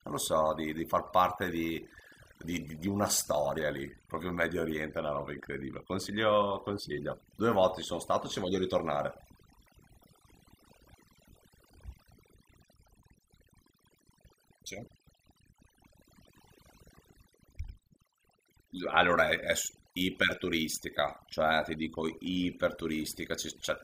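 Overdone noise removal runs throughout the speech: aggressive spectral gating drops bands near the noise floor, leaving near-silent, twinkling gaps.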